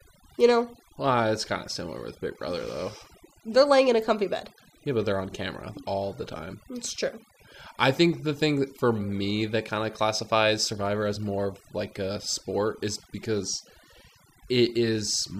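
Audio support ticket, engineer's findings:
Noise-reduction artifacts throughout; background drops and breaks up into twinkling specks between phrases. Overdone noise removal: reduction set too strong, so bands near the noise estimate are cut hard, taking quiet speech detail with them and leaving isolated spectral bursts.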